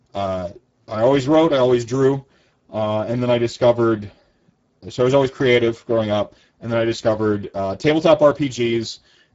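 Throughout the speech, Speex codec damage is plainly audible. Starved of excitation bits at a rate that points to roughly 10 kbps, the voice turns hoarse and noisy. A spectrogram shows smeared harmonics and nothing above 7.7 kHz.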